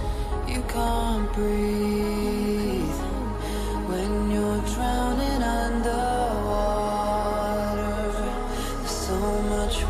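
Nothing in this audio stands out as a technical problem, so there's nothing here to flag.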